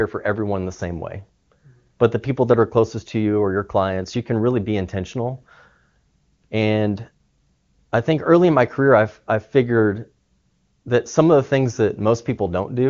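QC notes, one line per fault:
No faults to note in the speech, which carries AMR wideband (HD Voice) coding at 23.85 kbit/s with nothing above about 7.1 kHz.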